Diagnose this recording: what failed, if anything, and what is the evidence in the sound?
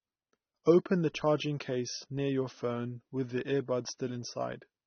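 The failure is at the codec stage. Throughout the speech nothing reaches above about 6.3 kHz, sibilants sound fizzy and smeared, and the tone is dull. This is likely AAC compression at a low bitrate, with the encoder discarding high bands and coarsely quantising the rest.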